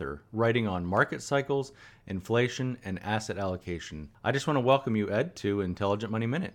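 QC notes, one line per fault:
No fault found.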